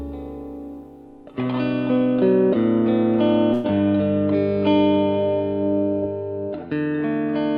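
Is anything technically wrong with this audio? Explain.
Yes. From 3.53 to 3.66 s the music is interrupted by a call audio freeze, most likely because packets stalled and the jitter buffer ran dry. For about 107 ms the receiver stretches the last sound into a fading buzz, then resumes where it stopped, so nothing is lost but everything after is pushed about 107 ms later. On a spectrogram this appears as a short band of smeared, fading energy with no new onsets. On the waveform it appears as a decaying, repetitive stretch. The Opus call path's band limit, with little energy above 12 kHz, also shows as a flat ceiling on the spectrogram.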